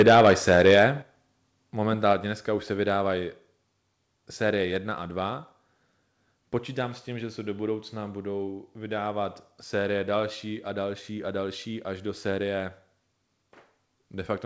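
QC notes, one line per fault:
0.00–0.85 s, microphone overload: the loudest peaks are flattened against the converter's ceiling, most likely because the input gain was set about 7 dB too high. Around one sample in twenty is clipped, and the squared-off waveform tops give the loud syllables a harsh, crackling edge.
1.02 s, microphone volume stepped down: sound and background both drop by about 6 dB in a single step just after the distorted opening. This is likely the call software detecting the clipping and lowering the device's input volume at once rather than gradually.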